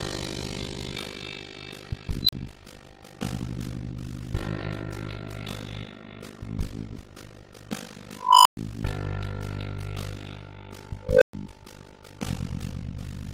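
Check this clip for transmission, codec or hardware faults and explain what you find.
There's one fault, present the whole way through: overlap-add ripple. The audio was split into windowed frames and rebuilt with overlaps that don't sum to a steady gain, so the level dips by about 60 dB around fifty times a second, giving a harsh, metallic buzz.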